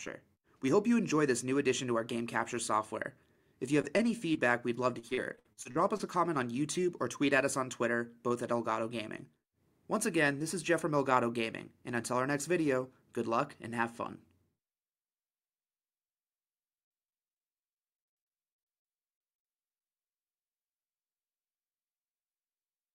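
Brief smears at 3.81–3.85 s, 3.97–4.01 s and 4.33–4.37 s are short concealed packet loss: about 20 ms missing each time, patched by extending the preceding sound. From 4.99 to 6.01 s the audio turns choppy, with repeated packet loss (robotic sound) leaving around nine holes, the longest about 56 ms, filling roughly 28% of that stretch.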